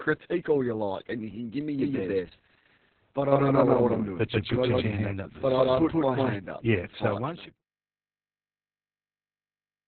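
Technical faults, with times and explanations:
throughout: Opus voice compression in narrowband SILK mode leaves nothing above 4.3 kHz, and coarse excitation coding makes speech muffled, hoarse and robotic, which fits roughly 6 kbps.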